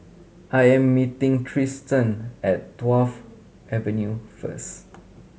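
No technical faults can be heard anywhere in the recording.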